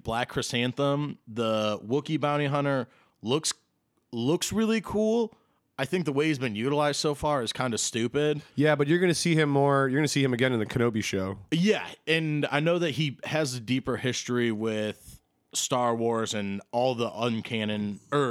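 No technical faults are audible anywhere in the recording.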